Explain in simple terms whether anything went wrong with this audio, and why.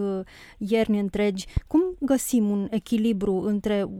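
One thing went wrong here: a loud pop at about 1.57 to 1.59 seconds, right after "ierni întregi". It's a single sharp click, clearly louder than the speech, and the talking carries on underneath without a break. That kind of pop is most likely a quick electrical jolt, say from a plug, a switch or a bit of static, getting into the signal and getting recorded as a short spike.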